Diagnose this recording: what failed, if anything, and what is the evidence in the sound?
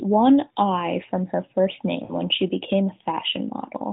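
Lost AMR speech frames, a network fault: from 2.04 to 2.13 s the decoder stretches its last good frame, so speech smears and fades, which fits three 20 ms frames.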